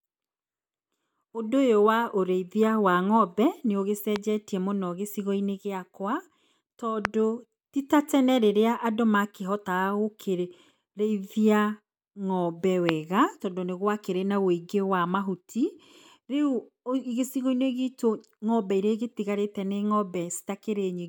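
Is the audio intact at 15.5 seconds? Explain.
Yes, at 15.5 seconds the speech plays through intact, with no dropout, click, distortion or other fault at that moment.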